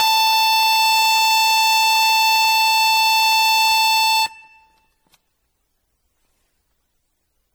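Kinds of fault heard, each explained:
Generation loss: The music sounds swirly and hollow throughout, with a watery smear over sustained parts and blurred, softened attacks. The damage is heavier than one low-rate encode would leave. It likely comes from repeated lossy coding, fitting an MP3 chain near 64 kbit/s run around seven times. Each decode and re-encode quantises again on a shifted frame grid. The noise and spectral holes from every pass stack up.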